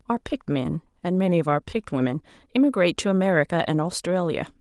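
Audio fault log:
No faults heard.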